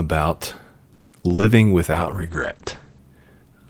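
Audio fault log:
0.93–1.44 s, repeated packet loss (robotic sound): The speech breaks up into a run of short holes, about five in half a second. Each hole is bridged by stretching the sound that came just before. That stretching fills about 290 ms and gives the metallic, robotic tint. Around 100 ms is simply missing. The longest hole lasts 190 ms. More than half of this stretch, about 57%, is patched rather than real. That is why it sounds choppy and synthetic.
1.91–3.06 s, call bitrate drop: The speech turns rough and muffled for just over a second. The encoder has been forced to spend far fewer bits. The coarseness suggests a fall from around 32 kbps to around 10 kbps. At that rate the top of the spectrum is sacrificed. The audio band shrinks from 20 kHz to 8 kHz, which dulls the sibilants and removes the air. The lowest point holds for 1.09 s before quality returns.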